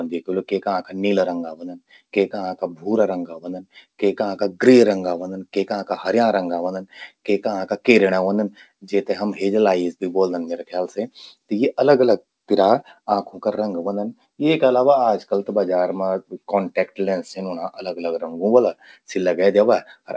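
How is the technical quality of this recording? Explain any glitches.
Nothing stood out on listening to this speech recording, which carries the narrower sound of a G.722 call path with nothing above 8 kHz, so there are no glitches to explain.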